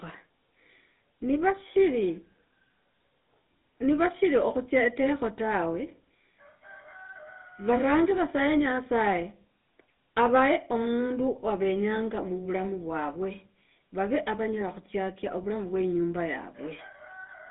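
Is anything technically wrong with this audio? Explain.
Yes. Throughout, the speech carries GSM full-rate codec damage, consistent with about 13 kbps. A vocal-tract model driven by regularly spaced pulses replaces the real excitation, leaving a buzzy, gravelly roughness. Unlike plain band-limiting, this grit remains within the 200 Hz to 3.7 kHz band, with nothing above 3.8 kHz.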